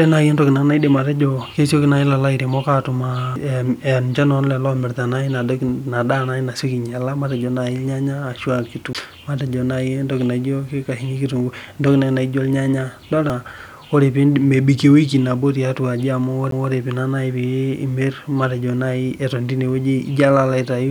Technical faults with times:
3.36 CD skip
8.93 CD skip
13.30 CD skip
16.51 CD skip

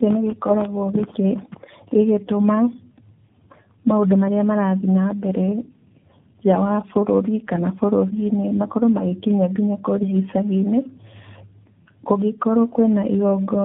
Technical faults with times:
0.00-13.65 tandem speech coding

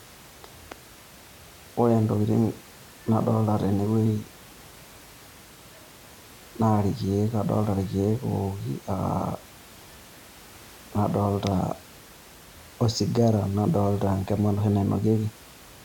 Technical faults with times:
none

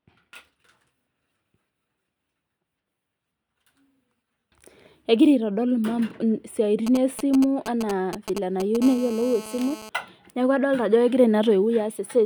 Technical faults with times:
6.87-8.77 GSM signalling bursts
8.82-9.89 GSM phone buzz

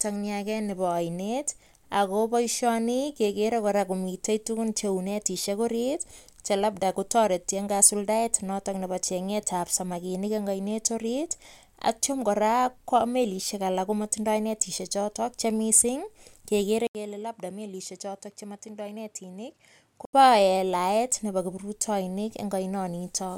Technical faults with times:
16.87-20.13 input switched to a poorer device

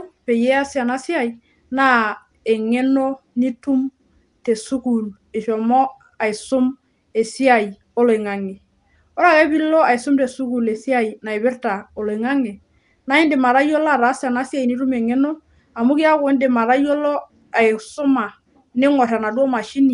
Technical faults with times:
0.00-19.93 Nellymoser compression

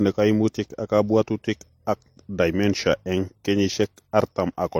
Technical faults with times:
0.00-4.80 transcoding between lossy codecs

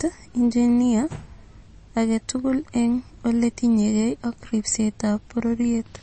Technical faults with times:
0.00-6.02 MP3 compression

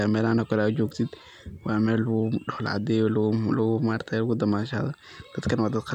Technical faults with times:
0.88-0.91 electrical switching spike

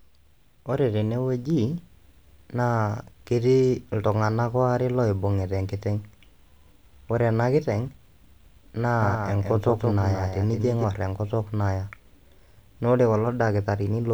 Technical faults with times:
9.02-10.84 doubled audio track

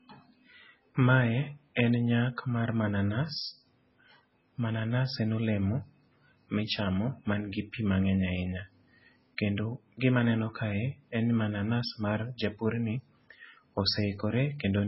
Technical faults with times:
0.00-14.88 MP3 compression
1.75 pre-echo

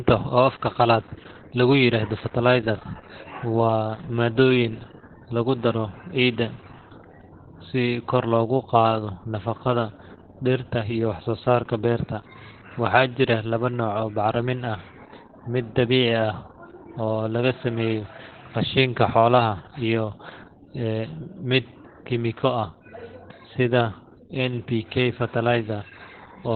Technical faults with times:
0.00-26.56 Opus voice compression

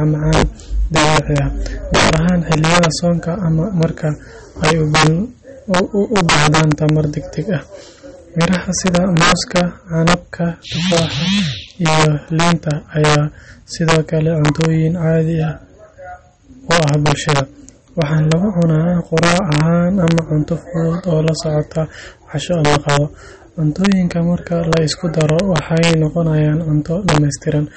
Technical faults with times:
0.00-27.77 integer overflow
0.00-27.77 MP3 compression

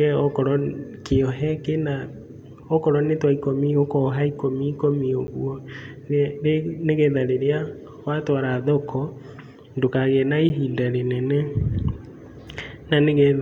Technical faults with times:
5.27 block of digital silence
10.49 block of digital silence

